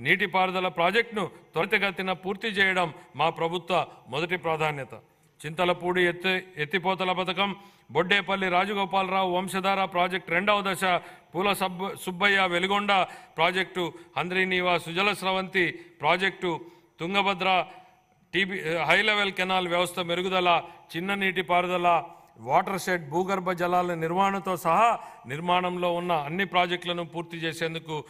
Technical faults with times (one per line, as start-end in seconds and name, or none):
none